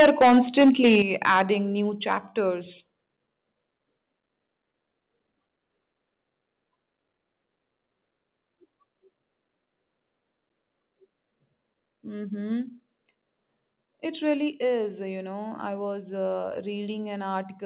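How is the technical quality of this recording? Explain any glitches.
The recording has clear level problems: the opening is overdriven, and the input level drops twice in sudden steps. Everything also sits under a 4 kHz ceiling, which fits a telephone-grade 64 kbps G.711 mu-law call path.

Microphone overload shows up from 0.0 to 1.41 s. The peaks run about 11 dB past the converter's limit, with roughly a tenth of the samples flattened, so the loudest moments take on a gritty, crackly edge. The likely cause is a mic input set too hot, so the converter chopped the tops off the waveform. A smaller burst of the same thing, about 2 dB over with only a sliver of samples clipped, gives a brief harsh crackle from 2.11 to 2.13 s.

Microphone volume stepped down at 1.02 s, cutting the level by about 8 dB in one go. At 14.52 s there's a gentler drop of about 2 dB. In both places the sound and the room behind it get quieter together, most likely because the call software reacted to the hot signal by lowering the device's input gain.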